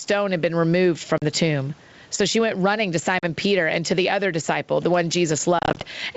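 Gain pumping runs through the whole of this speech recording: the level swings by around 10 dB, with the low room noise (about 41 dB below the speech) in the background, so loud and soft passages sit squashed together. That breathing is likely a fast limiter or compressor clamping down on a microphone gain set far too high. Packet loss on an ADPCM call cuts hard-edged holes at 1.18–1.23 s and 3.19–3.25 s, each about 40 ms of missing audio, which fits roughly four lost packets, and again at 5.59–5.84 s, where 120 ms goes missing in short gaps scattered over 220 ms, none longer than 30 ms, which fits about ten packets. Each gap is filled with silence. Because the G.722 coding, running at 64 kbit/s, predicts each sample from the previous ones and adapts its step size, the receiving decoder loses track of the sender across the gap, so the speech comes back slightly distorted before settling within a few tens of milliseconds.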